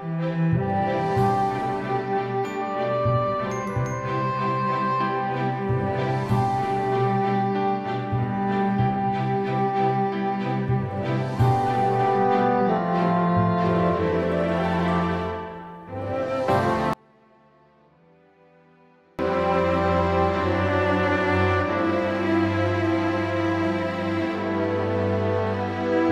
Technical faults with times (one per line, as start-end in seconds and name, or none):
16.93-19.19 one channel inverted